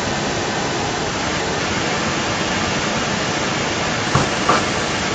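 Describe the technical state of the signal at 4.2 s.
At 4.2 s an echo leak is audible, as throughout the clip. A copy of the speech returns about 0.34 s late, about 5 dB louder than the original. It likely comes from a far-end loudspeaker whose echo canceller let the sound through.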